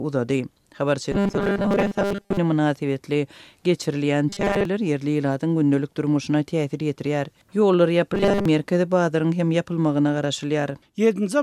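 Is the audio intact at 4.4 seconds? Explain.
No. From 4.29 to 4.65 s there is robotic sound from repeated short buffers: a rigid metallic buzz at 200 Hz, likely from a 5 ms stretch being looped over most of that span. The steady pitch, rather than silence or a click, sets it apart from a dropout.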